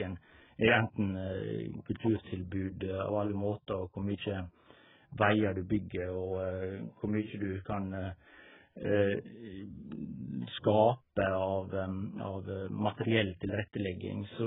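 From start to finish the speech sounds dull and muffled, with nothing above 3.8 kHz, and sibilants and held vowels carry a warbling, fizzy smear. This is most likely AAC compression damage: starved of bits, the encoder has lowered its cut-off and left gaps in the spectrum. The heavy damage fits a very low AAC-LC bitrate of around 8 kbps.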